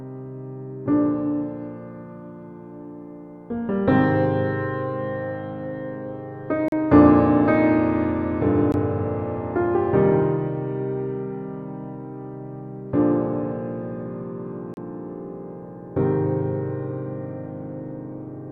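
At 6.68 to 6.72 s, 8.72 s and 14.74 to 14.77 s the sound drops out for about 39, 18 and 31 ms. Each is a gap between stream segments: the time stamps of adjacent segments don't meet, so the player pads the hole with silence and then resumes where it left off, with nothing lost. The spacing, in multiples of two seconds, fits 2-second segments. On a waveform each shows as a flat line with sharp edges; a spectrogram shows a narrow, empty vertical stripe.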